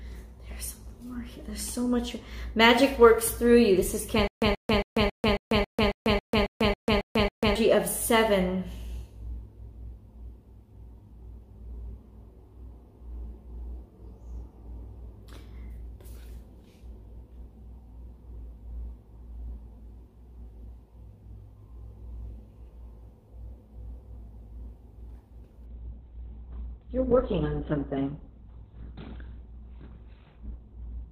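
From 4.28 s to 7.55 s the same fragment of about 130 ms plays again and again, twelve times, each followed by about 144 ms of dead digital silence, so the burst returns every 273 ms in a steady, mechanical rhythm. This is a stutter with silent gaps. The likely cause is a stalled player or stream that replayed its last buffered fragment on each retry and then ran dry, so the audio due in that span never arrives.

At 25.66 s the sound abruptly turns dull, with nothing above 4.3 kHz and rising codec artefacts. This continues to the end with no gap at the switch. The cause is an adaptive stream at a lower bitrate: the connection slowed and the player switched from a higher-quality version to a much leaner one. The drop in detail fits a fall from around 64 to roughly 12 kbit/s in an Opus stream.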